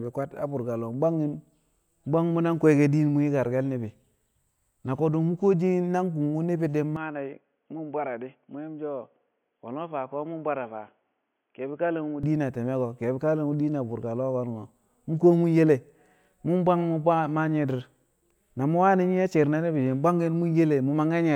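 Input switched to a poorer device, likely, from 6.96 to 12.23 s: speech narrows to nothing above 3.4 kHz, turning boxy and about 5 dB quieter, then clears.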